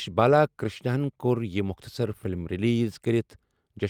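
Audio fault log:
0.31 to 0.33 s and 2.03 to 2.05 s, lost packet rebuilt from error correction: each spot has a brief rough, noisy patch lasting 20 ms, the second just after "ہَن کوٚر یہِ". Neither breaks the flow of the speech. The length fits a single lost packet, with the following packet supplying a low-bitrate copy that the decoder played in its place. That coarser copy fills the gap but sounds grainier than the surrounding audio.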